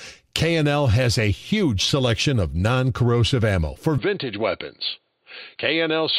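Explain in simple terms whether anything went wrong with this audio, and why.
Input switched to a poorer device at 3.98 s, right after "ammo for": the sound turns duller and a bit quieter, with nothing above 4.6 kHz, likely from a change to a lower-quality microphone.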